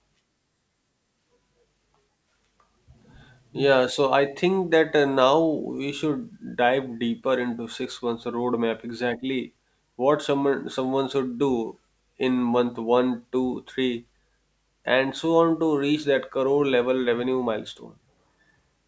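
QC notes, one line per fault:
Throughout, aliasing: the audio was downsampled from 48 kHz to 16 kHz with no anti-alias filter, so energy above the 8 kHz fold point reflected back into the band, leaving sibilants gritty and metallic and the spectrum crowded right up to 8 kHz, at roughly 35 dB below the speech.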